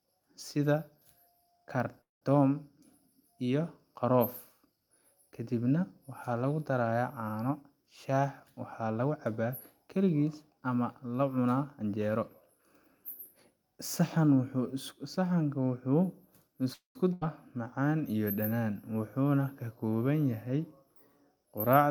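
At 2.01 to 2.31 s and again at 16.73 to 16.97 s there is a call audio freeze. The speech stalls for about 0.2 s, with a brief fading continuation before the near-silent stretch, and then resumes where it stopped, likely because delayed packets ran the jitter buffer empty.

At 17.13 s, shortly after the second freeze, a skip ahead follows. Roughly a third of a second of speech is dropped and the audio on either side is joined across only about 80 ms, so playback lurches forward abruptly and the delay added by the freeze is partly removed.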